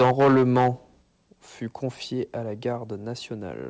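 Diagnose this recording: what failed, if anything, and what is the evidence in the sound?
Microphone overload at the converter, 0 to 0.68 s: harsh crackle on peaks, likely from input about 9 dB too hot. The waveform shows flat-topped peaks on roughly 15 percent of samples.

Microphone volume stepped down at 1.02 s, just before "fut confié à la": voice and background drop about 6 dB at once, likely call-processing gain control. The waveform envelope steps down, and the spectrogram dims evenly across its band, which stops at 8 kHz.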